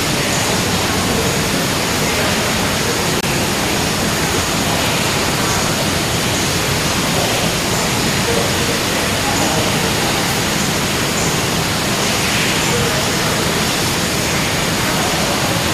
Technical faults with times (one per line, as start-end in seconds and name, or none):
3.20-3.24 corrupt frame muted
5.28-5.30 loud pop